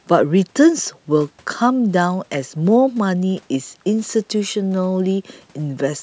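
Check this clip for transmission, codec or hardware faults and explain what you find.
Nothing wrong turns up in the transmission, codec or hardware here; the speech simply carries the usual sound of a call microphone's processing, with the lowest bass trimmed away as expected.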